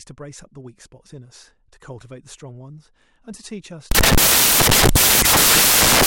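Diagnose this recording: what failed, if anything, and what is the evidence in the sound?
The fault is in sample-format conversion: from 3.91 s to the end of the speech clip, the audio turns into loud, harsh broadband noise because the samples are built from the wrong bytes. With the bytes misaligned or swapped, the fast-changing low bits land in the most significant position, so every value becomes essentially random. Unlike ordinary hiss or clipping, this noise is loud and harsh and spreads across the whole spectrum.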